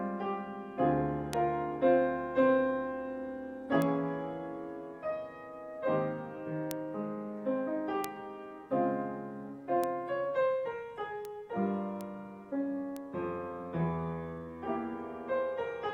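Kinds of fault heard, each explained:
Bit error spike: a flipped bit knocks one sample, or a few, far off its true value, giving eight isolated sharp ticks peaking at about -20 to -8 dBFS. Each appears as a lone needle on the waveform and a thin full-band vertical line on the spectrogram.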